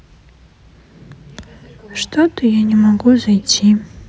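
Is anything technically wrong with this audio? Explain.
No, nothing in this bit of speech stands out as a technical problem; it all sounds just as it should.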